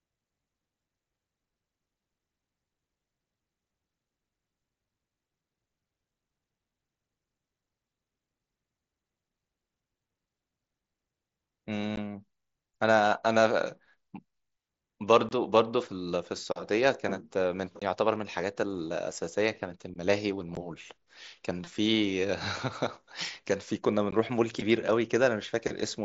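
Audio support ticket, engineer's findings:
Short, hard-edged dropouts at 11.96 s, 15.29–15.31 s, 17.79–17.82 s, 20.55 s and 24.11 s, each lasting 15 or 22.5 ms. Unconcealed Bluetooth headset packet loss on the wideband mSBC link: consecutive packets, fitting 7.5 ms frames, never arrive, and silence or an idle pattern replaces them without any fill.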